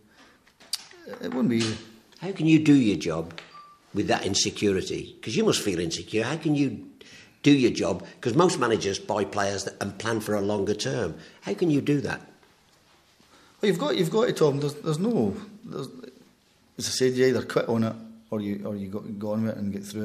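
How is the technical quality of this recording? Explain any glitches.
One glitch stands out: an electrical switching spike at 15.11 s. A nearby switch, motor or static discharge most likely arced briefly, and the audio line picked up that burst of interference as an electrical impulse riding on the signal. The result is a sharp snap or tight cluster of clicks laid over the sound at that instant. It peaks somewhere around -30 dBFS.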